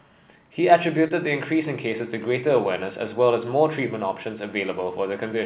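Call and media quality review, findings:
Short concealed packet loss, 1.08 to 1.12 s. Brief smear in the speech. About 20 ms of audio missing, which fits one lost packet. Jitter buffer concealment extended the preceding sound, then crossfaded back. Band limit at 4 kHz matches narrowband G.711 mu-law.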